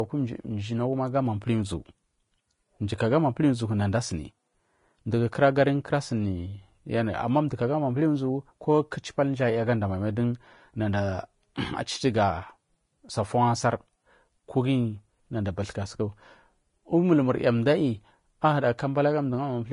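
Speech throughout with nothing above 10.5 kHz and a hissy, grainy treble, likely Vorbis compression at a rate near 32 kbps. Lost detail is replaced by noise rather than the swirling, metallic artefacts of MP3.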